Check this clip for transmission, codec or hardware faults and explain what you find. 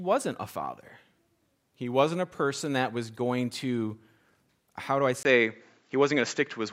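One fault: at 5.23 s, after "how do I", input likely switched to a poorer device, cutting everything above 7.6 kHz, with a 20 ms gap, faint new background noise and a level shift of roughly 5 dB.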